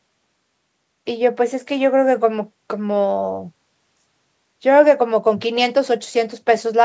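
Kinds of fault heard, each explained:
No fault can be heard in this speech recording. The sound has passed through a call's microphone processing, which removes the lowest bass and leaves nothing above 8 kHz, as expected for that path.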